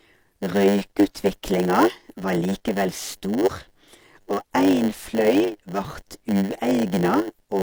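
A block size mismatch (padded) runs through the whole recording: one stage hands on blocks about 8% shorter than the next stage reads, and the shortfall in each block is filled with silence. The speech therefore carries a steady 100 Hz buzz from these regularly spaced gaps, and it plays at 0.919 times normal speed, slightly drawn out in timing while its timbre stays about where it should be.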